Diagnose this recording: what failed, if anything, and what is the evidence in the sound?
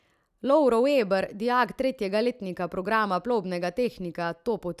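Listening through the speech closely, nothing stood out that would point to a failure at any stage of the chain.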